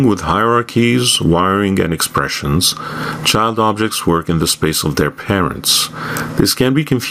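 Gain pumping runs through the whole clip, with the gain swinging by around 25 dB. The likely cause is input gain set far too high, with a fast limiter or compressor dragging it back down. Unlike a noise gate, the background never drops to silence.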